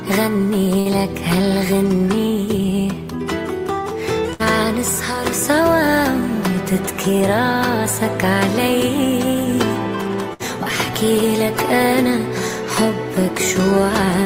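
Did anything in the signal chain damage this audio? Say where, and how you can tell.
Yes. A burst of packet loss at 0.79 to 0.88 s, 4.33 to 4.42 s and 10.33 to 10.43 s points to the network stage. At each point a few consecutive packets never arrived in time, so the receiver stretched the last sound it had for about 60 ms, letting it sag in level. The audio then picks up again roughly 60 ms further along, with that stretch of sound simply gone.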